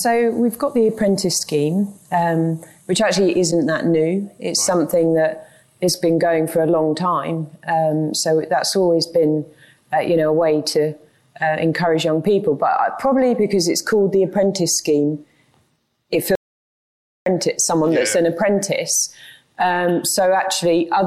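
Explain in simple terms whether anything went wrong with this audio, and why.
Something did go wrong: an audio dropout to silence from 16.35 s to 17.26 s. The sound stops abruptly and about 0.91 s of silence follows, with no background hiss, before it resumes. The input was likely lost briefly while recording continued writing silence.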